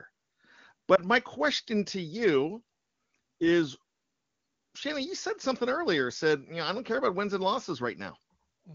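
At 0.95 to 1.01 s a lost AMR speech frame, fitting a single 20 ms gap, produces a brief dip or warble, not the hard silence or click of a cut.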